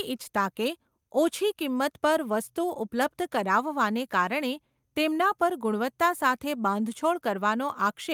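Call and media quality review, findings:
No findings from the call and media quality review.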